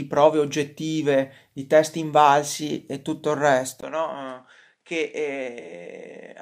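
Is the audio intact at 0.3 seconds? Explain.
Yes, the audio is intact at 0.3 seconds, with no audible fault at that moment.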